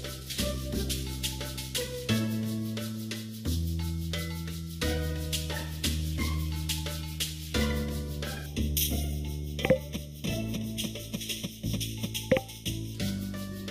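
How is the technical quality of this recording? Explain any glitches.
One stretch of the recording has a fault. From 8.46 to 12.95 s the sound turns hollow and phasey, with a dip around 1.5 kHz. This is channel delay (comb filtering): one channel arrives roughly a third of a millisecond late, and when the two are summed to mono, content common to both cancels at evenly spaced frequencies, cutting a fixed comb of notches into the spectrum.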